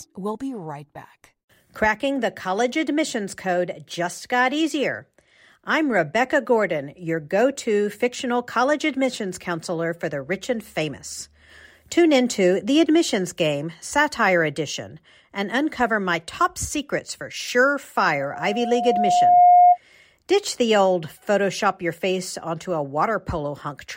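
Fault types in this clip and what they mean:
Loudspeaker feedback squeal: the microphone hears its own loudspeaker, and a 714 Hz tone builds over about a second and a half, ending well above the speech.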